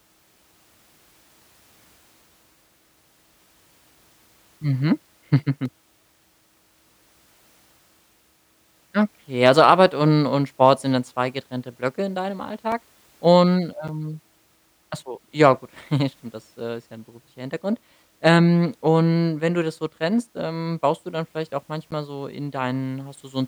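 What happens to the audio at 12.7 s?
A sharp tick at 12.72 s, just after "in deinem", where the sound drops out for about 2.9 ms. This is a block of digital silence: a run of samples came out as zeros, which fits a 128-sample buffer left unfilled, with the sound cutting out and back abruptly.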